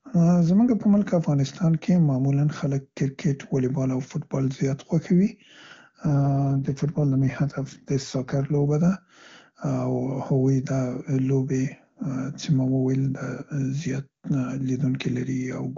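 It's a speech clip carried over AMR-WB (HD Voice), and the top rate sounds clean, which fits 23.85 kbit/s. From 6.06 to 8.64 s there's an AMR rate drop. The band stays just as wide and nothing cuts out, but the voice goes noticeably rougher and more synthetic, consistent with the network pushing the codec down to around 8.85 kbit/s to protect a weak radio link. Then the quality snaps back once the higher rate returns.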